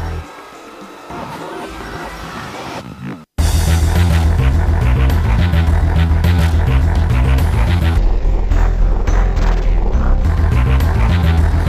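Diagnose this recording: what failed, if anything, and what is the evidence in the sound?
From 7.98 to 10.25 s the audio runs at half speed, an octave low: stereo read as mono in sample-format conversion, interleaved left-right samples played sequentially.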